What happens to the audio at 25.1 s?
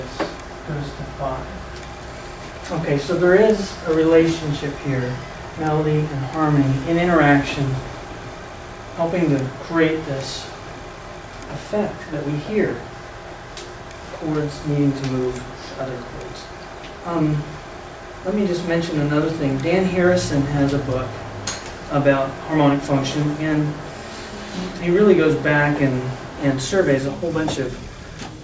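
Nothing goes wrong at 25.1 s; the audio there plays through intact, with no dropout, click, distortion or other fault.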